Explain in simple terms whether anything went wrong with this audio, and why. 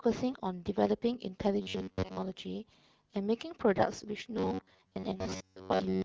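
Robotic sound from repeated short buffers appears from 1.62 to 2.22 s and again from 4.37 s to the end of the clip. The speech turns into a stiff, metallic buzz at about 94 Hz, though it still roughly follows the words. The likely cause is new audio arriving too slowly, so the playback fills the gaps by replaying the last sliver of sound, about 11 ms long, over and over. Most of the real audio in those stretches is skipped.

AMR bit errors occur briefly, from 3.76 to 3.83 s, where the voice sounds hoarse and gargly for a moment. That span matches a few of the small packets that the AMR wideband (HD Voice) phone codec sends, arriving with a few percent of their finer details flipped. The voice keeps roughly the right pitch and loudness, but the decoder rebuilds it from wrong values, so it comes out scratchy.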